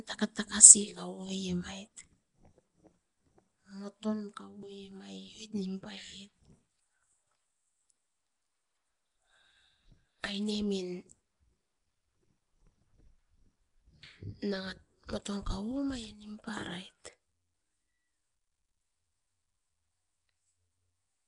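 From start to finish the speech carries a rough, hissy halo and a smeared, underwater blur, plainly audible and likely Nellymoser compression at a rate near 44 kbps. Starved bands are filled with noise, showing as grainy smudges on a spectrogram, with nothing above 10.6 kHz.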